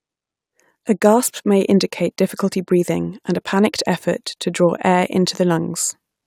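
No technical faults can be heard anywhere in the recording.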